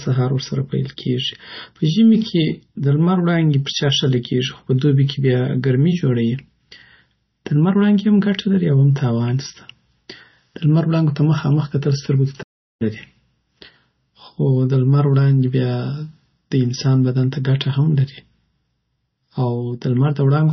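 A starved encoder, likely MP3 compression at a low bitrate, cuts everything above 5.9 kHz and drops weak detail, leaving the speech dull, watery and swirly throughout. At 12.42 s a playback stall, likely the player running out of data, silences the speech for about 0.38 s until it resumes at 12.82 s.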